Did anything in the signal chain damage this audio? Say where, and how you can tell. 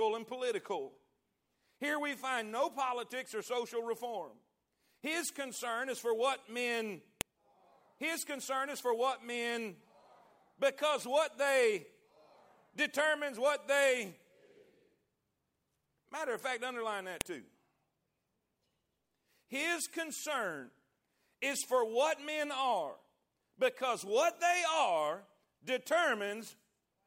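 Yes. The damage happened at the storage stage, where separate files were joined. There are two sharp, loud clicks, at 7.21 s just after "is for what men" and at 17.21 s just after "of fact underline". They are exactly 10 s apart, and neither follows anything in the speech. This is a file header played as audio. Each joined piece kept its WAV header. Those few dozen bytes were read as samples and produced a brief snap at every piece boundary.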